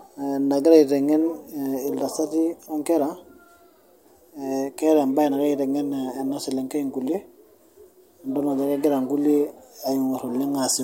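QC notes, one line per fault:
No faults found in this speech recording. Nothing was heard that needs flagging.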